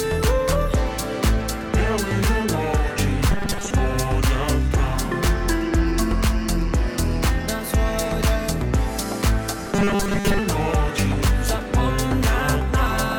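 From 3.31 to 3.71 s and again from 9.67 to 10.39 s, robotic sound from repeated short buffers: a rigid metallic buzz at 200 Hz, likely from a 5 ms slice looping while most real audio is skipped. Unlike a dropout, sound never stops; its fixed pitch sets it apart.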